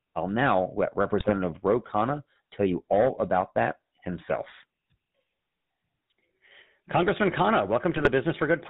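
From start to finish the speech carries the GSM full-rate codec's buzzy, gravelly roughness with nothing above 4 kHz, which fits 13 kbps GSM rather than plain band-limiting. GSM bit errors from 1.20 to 1.31 s and again from 7.96 to 8.10 s corrupt the decoder's filter, pitch and gain values, producing brief squawks and gargling bursts rather than the clean silences of dropped frames.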